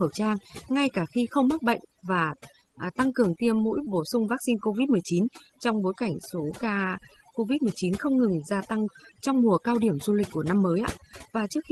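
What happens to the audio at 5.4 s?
At 5.4 s the speech is caught by overdone noise removal, which affects the whole clip rather than this moment alone. The noise reduction was set too aggressively, so any frequency band whose level sits near the estimated noise floor gets pushed far down or switched off, taking the softer parts of the voice with it. The background collapses into near silence dotted with twinkling specks, and the voice has its top end stopping around 12 kHz as the call codec passes it through.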